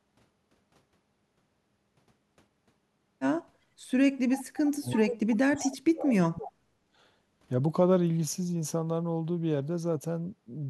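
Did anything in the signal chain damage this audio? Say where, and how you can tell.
Yes. Background gated by the echo canceller, 3.59 to 3.70 s: room sound dips about 10 dB for roughly 70 ms as call-processing echo cancellation clamps the microphone during far-end playback.

Echo leak at 4.38 to 4.70 s, 5.58 to 5.74 s and 6.23 to 6.29 s: a faint copy trails 338 ms behind, likely residual loudspeaker echo the canceller failed to subtract.

Speech suppressed in double talk, 4.66 to 6.65 s: the talker drops very deeply in pieces, likely the canceller attenuating everything while both sides overlapped.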